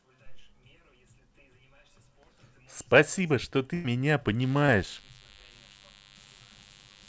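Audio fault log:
3.74–3.86 s, burst of packet loss: about 100 ms of audio never arrived. The receiver stretched the last sound and faded it, so it smears before resuming later.
4.41 s onward, DECT cordless phone buzz: a nearby DECT radio pulses every 10 ms. The circuit rectifies it, giving a thin 100 Hz buzz, roughly 25 dB below the speech.
4.66–4.70 s, short concealed packet loss: 20 ms went missing. The decoder filled it by continuing the previous sound, leaving a brief smear under the buzz.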